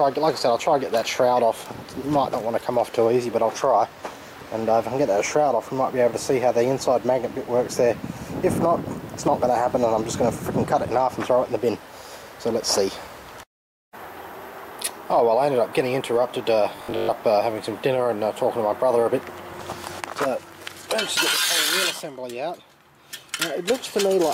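Robotic sound from repeated short buffers at 16.77 to 17.15 s: a rigid 50 Hz buzz, likely from roughly half the audio being replaced by repeated 20 ms chunks.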